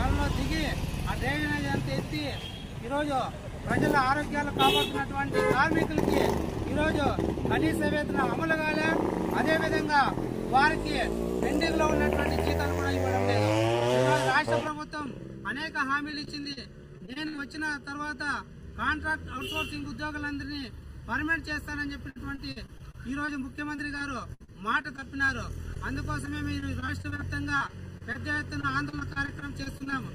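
Channel delay (comb filtering) begins at 14.67 s and lasts to the end. One channel runs late by a fraction of a millisecond, and the mono sum cancels at evenly spaced frequencies starting near 700 Hz, leaving a hollow, phasey colour.

Repeated packet loss (robotic sound) follows at 16.11 to 16.65 s and 16.98 to 17.40 s. Packets repeatedly arrive late or not at all, and each hole, up to about 60 ms, is patched by stretching the preceding sound, so the audio turns choppy.

The same robotic packet loss returns at 22.10 to 23.30 s and 23.76 to 25.30 s, with frequent holes of up to about 60 ms.

Short concealed packet loss occurs at 25.74 to 25.77 s. About 20 ms never arrived in time, and the receiver extended the last sound before blending back, producing a brief smear or wobble.

Repeated packet loss then resumes at 26.25 to 28.17 s and 28.61 to 29.94 s. Here the gaps are shorter, at most about 34 ms, but closely spaced, keeping the sound broken and robotic.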